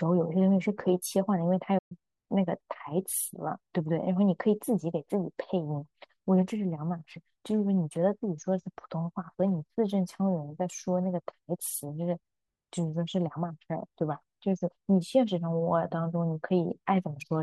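At 1.78 s the speech cuts out abruptly and stays silent until 1.92 s, a gap of about 121 ms, before carrying on. This is a playback stall, likely caused by the player running short of buffered data or its audio thread being held up, so nothing reached the output until it caught up. On a waveform the signal drops to a flat line mid-phrase; on a spectrogram a clean vertical blank band cuts across all frequencies.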